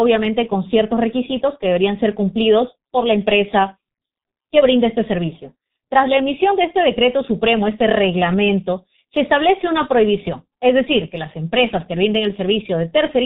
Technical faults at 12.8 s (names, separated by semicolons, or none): G.723.1 codec